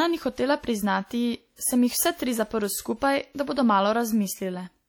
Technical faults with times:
0.00-4.88 WMA compression

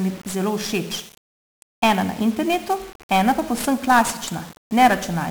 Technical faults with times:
0.00-5.31 1-bit DFPWM compression

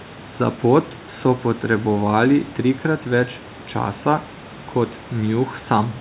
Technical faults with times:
none

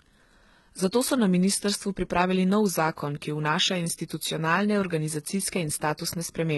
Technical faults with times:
0.00-6.58 HE-AAC compression

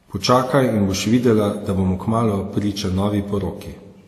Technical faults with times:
0.00-4.07 transcoding between lossy codecs

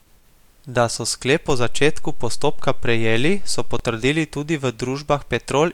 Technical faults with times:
1.50-3.79 DC step

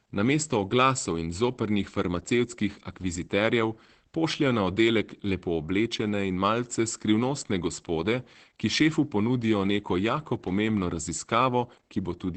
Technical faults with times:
0.00-12.36 Opus voice compression

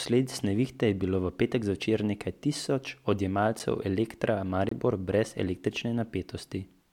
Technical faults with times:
3.59 block of digital silence
4.69-4.71 block of digital silence

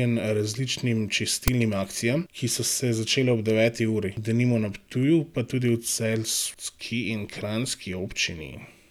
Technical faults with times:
1.48 file tags played as audio

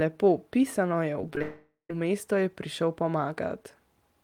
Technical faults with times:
1.21-1.41 repeated packet loss (robotic sound)
1.42-1.90 long network dropout

